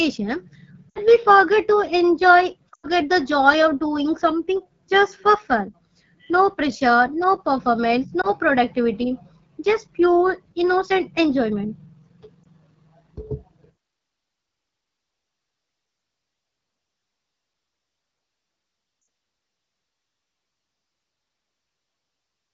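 Rough, raspy speech throughout points to the AMR wideband (HD Voice) codec running at a low rate, which fits its 8.85 kbit/s mode. Brief warbles and fading dropouts at 0.91 to 0.99 s, 2.73 to 2.87 s just before "the joy of doing", 8.21 to 8.32 s between "pressure no performance" and "productivity just pure innocent", 12.44 to 12.48 s, and 19.01 to 19.07 s are lost AMR speech frames. The decoder held its last good settings with falling gain.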